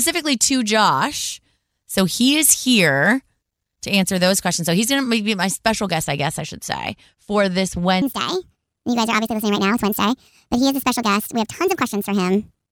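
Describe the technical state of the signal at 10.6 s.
At 10.6 s the speech is inside a section at the wrong speed, running from 8.02 s, after "should say for this", through 12.71 s. Playback runs 1.49 times too fast, likely from a clock mismatch, so the voice sounds hurried and about seven semitones higher.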